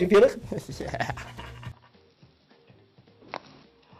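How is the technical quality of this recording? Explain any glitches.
The recording has one clear fault: from 1.72 s to the end, the sound turns dull and boxy, with nothing above 5.6 kHz. This is most likely the input switched to a poorer device partway through, a capture path with a narrower band and its own character. There is no gap at 1.72 s. A filter or codec narrowing the band would not bring the slight level drop and the faint new background noise that arrive with the change, and those point to a different device.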